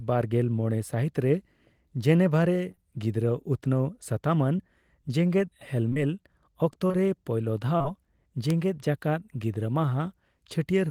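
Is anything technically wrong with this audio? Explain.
Yes. The speech has network losses in three places and one digital tick.

Short concealed packet loss occurs from 2.71 to 2.79 s, where two consecutive 20 ms chunks failed to reach the decoder in time, and again from 4.57 to 4.60 s, just after "ᱩᱛᱱᱟᱹᱣ ᱥᱟᱛᱟᱢ". Each time the receiver bridged the hole by extending the preceding sound, following its pitch if voiced and using shaped noise if not, then crossfaded back into the real signal. The result is a brief smear or wobble, slightly longer at 2.7 s because two packets in a row were patched.

Scattered short gaps run from 5.90 to 7.86 s. Roughly seven separate packets of about 20 ms each went missing or arrived late, spread across the two seconds. Each one was patched by continuing the last sound, so about a tenth of a second in total, around 7% of that stretch, is reconstructed. The speech stays intelligible but picks up a string of small hiccups and ticks.

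A bit error spike occurs at 8.50 s. A flipped bit in memory or on a digital link knocked three consecutive samples off by a power of two before they snapped back. That produces a single sharp, broadband click with no relation to the speech around it.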